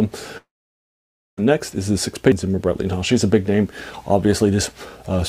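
A long network dropout, likely a stretch of about 1 s in which no audio reached the receiver, hits the audio from 0.37 to 1.39 s. The receiver carries the last sound on as a fading buzz, then leaves about 0.91 s of silence before playback resumes with that second of material simply gone. A CD skip follows at 2.32 s, where the laser jumps to another turn of the disc's spiral. It is heard as a brief tick from a mute of only a couple of milliseconds, after which the sound continues from a different point on the disc.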